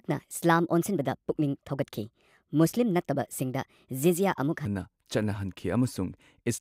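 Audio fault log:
0.00–4.65 s, section at the wrong speed: the speech runs 1.3 times too fast, so it sounds hurried and raised by about five semitones, then drops back to natural pitch and pace at 4.65 s. This is likely playback or editing against a mismatched clock, which shifts tempo and pitch together. On a spectrogram the harmonics and formant bands sit higher and more widely spaced before 4.65 s, then step down. The waveform shows compressed syllable envelopes in that stretch.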